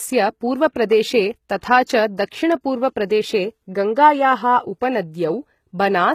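HE-AAC compression runs throughout the speech. The treble is likely rebuilt by spectral band replication, which fits a very low bitrate near 20 kbps. Its copied upper bands turn s sounds gritty and metallic, with nothing above 14.9 kHz. Pre-echo occurs at 1.61 to 1.63 s and again at 1.85 to 1.88 s. In each case, block-wide quantisation noise leaks ahead of a sharp attack, giving a 24 to 29 ms hiss and a softened onset.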